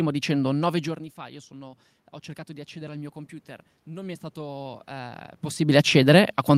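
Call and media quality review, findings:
Automatic gain rising, 3.85 to 5.87 s. Voice and room noise swell together over about two seconds. The AGC stage is reacting to an input drop of about 18 dB and adds about 4 dB of gain. The talker's movement near 5.5 s overlaps the rise.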